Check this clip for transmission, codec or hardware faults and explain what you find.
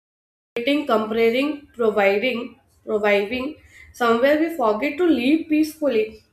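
One fault is present, a cut-off start. The recording began late, so from 0.0 to 0.57 s there is only digital silence, and the speech then enters at 0.57 s already mid-sound, with no natural attack or fade-in, just an abrupt hard edge.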